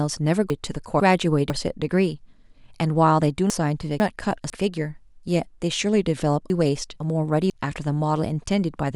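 Three times in this speech clip, a 500 ms chunk was delivered late by one chunk and played after the chunk meant to follow it, so each pair is swapped: chunks out of order between 0.5 and 1.5 s, 3.5 and 4.5 s, and 6.5 and 7.5 s. No audio is lost, but the reversed halves make each second sound jumbled, with hard joins at the start, midpoint and end of each span.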